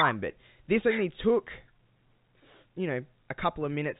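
No technical faults can be heard in this speech recording, which carries the narrow band of ordinary G.711 telephone coding working as intended, with nothing above about 3.8 kHz.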